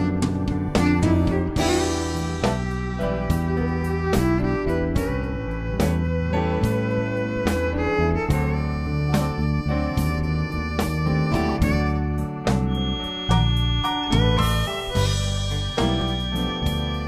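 Feedback whistle from 12.65 s to the end: a thin, steady tone at 3.3 kHz, around 10 dB under the main sound and swelling and fading slowly in level. It likely comes from a loudspeaker-to-microphone loop held just at the edge of feedback, sustaining one frequency without running away.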